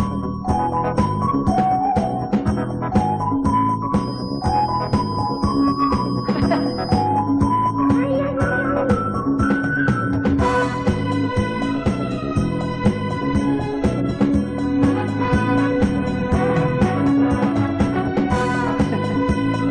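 From about 3.94 s to 7.10 s there's a feedback whistle sitting behind the sound: a thin, steady tone at 5 kHz, slowly swelling and fading in level and running roughly 20 dB under the main signal, so it's more nagging than dominant. The likely cause is a loudspeaker feeding back into the microphone with the loop gain hovering right at the edge, enough to sustain that one frequency without tipping over into a full howl.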